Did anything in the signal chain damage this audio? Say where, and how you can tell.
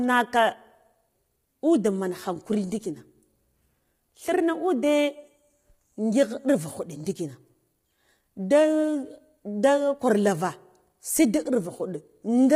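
Yes: low-delay AAC compression, throughout. The speech sounds rough and grainy, with noise filling the gaps between harmonics and nothing above 19.7 kHz, which fits AAC-ELD at about 24 kbps. The likely cause is the codec stage: its short frames resolve pitch harmonics poorly.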